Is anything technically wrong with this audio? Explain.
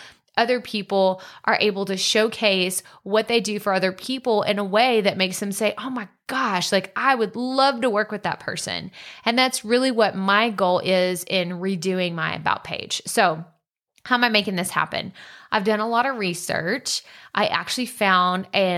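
No, nothing technically wrong can be heard here.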